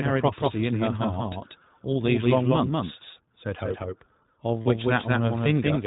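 From start to finish every syllable of the speech has a dry, uncoloured echo trailing it by about a fifth of a second, only somewhat quieter than the original. This doubled audio track most likely comes from the same signal reaching the mix twice, once directly and once through a slower path, so a full-band copy sits a fixed distance behind the first with no reverberant decay.

The whole clip is also band-limited, with nothing above 4 kHz. The speech stays intelligible but has a rough, slightly synthetic grain, and the damage is plainly audible. This is the iLBC codec at work. It models each frame's excitation independently and discards everything above the narrowband limit, which fits its 15.2 kbps mode with 20 ms frames.

From 0.17 s to 5.85 s a steady series of sharp ticks runs under the speech, about thirty of them at roughly 0.15 s intervals and varying in strength. These are word clock ticks. 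The receiving device runs on its own clock instead of locking to the sender's, so each time the two clocks slip past each other a single sample is dropped or repeated. The spacing points to the clocks differing by roughly a hundred parts per million.

At 4.62 to 4.67 s the speech briefly turns into a held, faintly buzzy tone and then snaps back to normal almost immediately. These are lost iLBC frames, 40 ms of missing data, which fits two lost 20 ms frames. The decoder covers the gap by repeating the last pitch cycle mixed with noise. Because iLBC frames do not depend on earlier ones, the decoder recovers as soon as good packets resume.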